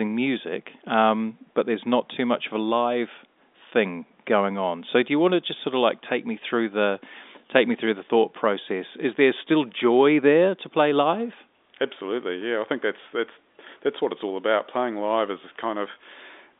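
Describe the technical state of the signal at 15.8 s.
At 15.8 s the audio is intact, with no fault, only the band-limited character of telephone coding and faint room noise well below the speech.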